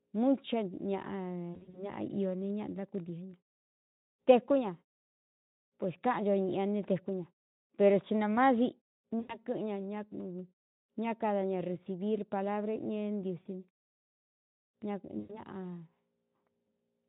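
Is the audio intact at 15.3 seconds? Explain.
No. From 15.19 to 15.40 s there is VoIP packet loss concealed by the speech codec: about 100 ms of audio went missing, and the decoder extended its last pitch and filter while lowering the gain, so the sound smears into a fading buzzy tone or coloured noise.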